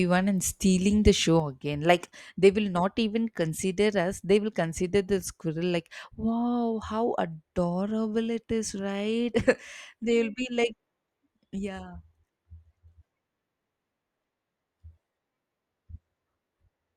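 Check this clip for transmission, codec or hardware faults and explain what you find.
One fault: a sudden gain jump. At 1.40 s, right after "and stealing the", the speech and its background noise drop together by about 6 dB and stay lower to the end. The likely cause is a digital gain setting, or a one-bit shift, applied instantly without any ramp.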